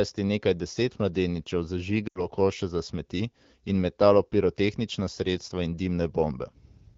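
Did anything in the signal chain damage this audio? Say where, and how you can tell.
Yes. Just after "nekaj deset mladeničev", from 2.07 to 2.26 s, the speech drops to near silence within two frames, then returns weak and rough before "koše za smeti in". These are lost AMR speech frames on the radio link. About 80 ms of data failed its checksum, consistent with four 20 ms frames. The AMR-WB decoder, running at 12.65 kbit/s, filled the gap by repeating the last good pitch and vocal-tract settings at falling gain.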